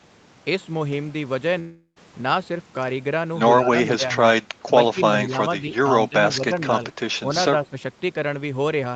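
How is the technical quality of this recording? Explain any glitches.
The recording has two kinds of glitch: one clear gap early on and a handful of short level dips later in the speech. The top end stops around 8 kHz throughout, as expected from the Opus call path.

From 1.59 to 1.98 s there's a long network dropout, likely. The last sound is stretched into a fading buzz, drops to about 0.09 s of silence, then resumes with roughly 0.36 s of speech missing.

The speech ducks briefly at 3.71–4.03, 5.28–5.35, 6.09–6.15, 6.36–6.54 and 7.66–7.77 s. The dips run from a few dB to about 15 dB at the deepest. That's likely speech suppressed in double talk: the echo canceller turned everything down while both ends were active.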